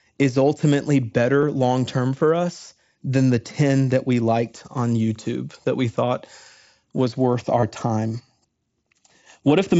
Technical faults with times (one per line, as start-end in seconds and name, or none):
1.41 concealed Bluetooth headset packet loss
7.60-7.63 concealed Bluetooth headset packet loss